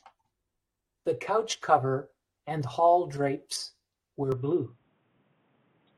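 A speech clip, and right after "and hall drapes were", at about 4.32 s, the sound abruptly goes dull and boxy through to the end. Everything above 3.8 kHz is gone, a faint new background noise comes in, and the level barely shifts, with no gap at the changeover. That's the signature of an input switched to a poorer device, most likely a fallback mic or a headset's call profile taking over mid-recording.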